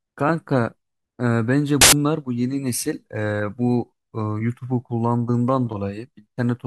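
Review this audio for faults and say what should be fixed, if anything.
From 1.81 to 1.93 s, roughly a tenth of a second of the speech turns into loud, harsh broadband noise. These are samples built from the wrong bytes: the reader misaligns each sample's bytes, shifting or swapping them, so the rapidly varying low-order bits end up as the most significant part of every value. Unlike clipping or distortion, the burst is broadband noise, not a squared-off or gritty version of the speech. Preventing it means parsing samples with the correct byte order and alignment, and rejecting any read that does not start on a sample boundary.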